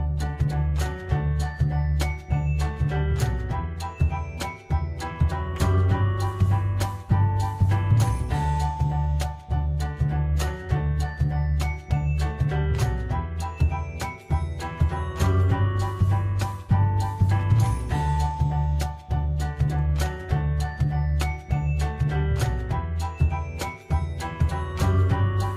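No technical faults can be heard anywhere in the clip.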